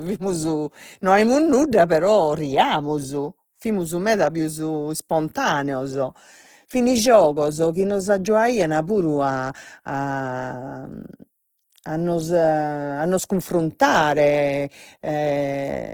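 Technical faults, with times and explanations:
Throughout: Opus compression. The speech sounds grainy and rough, with a noisy texture clinging to it and fine detail smeared into hiss; the damage is plainly audible across the clip. The likely cause is Opus in its music (CELT) mode starved of bits, which fits a rate near 16 kbps. It keeps each band's energy but fills starved bands with folded or noise content, so detail turns granular, while bandwidth stays full, up to 20.4 kHz.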